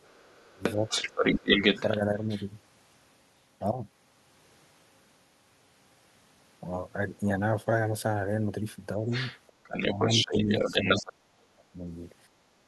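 From 0.01 to 2.46 s a second voice runs under the talker at about the same loudness. This is the other side's voice leaking through. The loudspeaker sound was likely not fully removed by the echo canceller.

Inside that stretch the talker dips twice, at 0.47 to 0.63 s and at 1.0 to 1.41 s. The first dip is the deeper one. This is speech suppressed in double talk. With both voices present, the canceller likely turned everything down.

The leak comes back from 9.11 to 11.12 s, again at a matching level. The suppression is harsher from 9.67 to 11.85 s. The talker drops very deep, for well over a second in total.

At 12.29 to 12.4 s the room sound dips briefly, by about 7 dB. This is background gated by the echo canceller. It clamped the microphone while the loudspeaker played, then released it.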